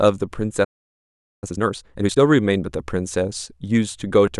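At 0.64 s the speech cuts to silence in mid-flow and stays silent until 1.44 s, a gap of about 0.78 s. This is a playback stall: the player most likely ran short of buffered data or had its output thread blocked, so nothing reached the output.

From 1.44 s to 2.20 s the speech runs at twice normal speed while keeping its normal pitch. This is time-compressed catch-up: the player clears the backlog from the stall by removing short slices and cross-fading across the joins.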